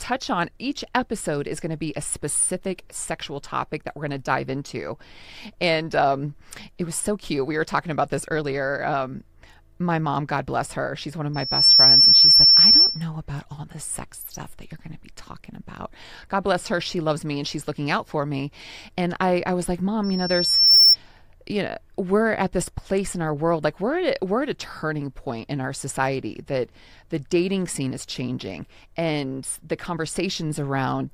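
Loudspeaker feedback squeal at 11.34–13.04 s, after "her she's one of", and 20.03–20.96 s, after "I I was like": a loop locking onto 5.4 kHz, swelling within a fraction of a second to about 15 dB above the speech.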